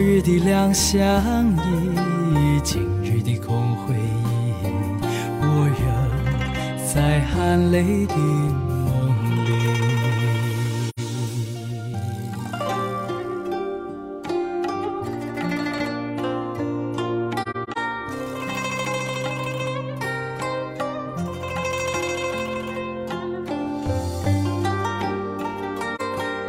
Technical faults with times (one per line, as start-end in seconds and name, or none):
10.89-10.99 AAC frame loss with muting
17.42-17.78 AAC frame loss with muting
25.95-26.01 AAC frame loss with muting